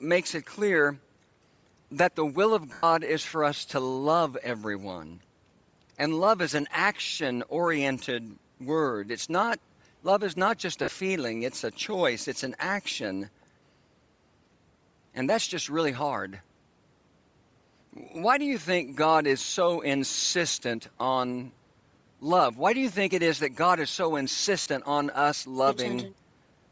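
The whole speech track has a breathy, grainy edge, with the upper spectrum sounding thin and noisy. That's likely Bluetooth LC3 compression. The codec discards a lot of high-frequency detail at low bitrates and fills the gaps with noise. The damage here is plainly audible and points to a rate around 32 kbps with 10 ms frames. The band stops at 8 kHz, which is just the call's microphone processing.

There are three short dropouts from lost LE Audio frames: 2.73 to 2.84 s (100 ms), 10.84 to 10.88 s (40 ms), and 24.61 to 24.66 s (50 ms). Each time, the decoder papers over the gap by reusing the last spectrum with scrambled signs, so you hear a brief noisy smear instead of clean speech. The first one is long enough that the concealment starts fading before the sound comes back.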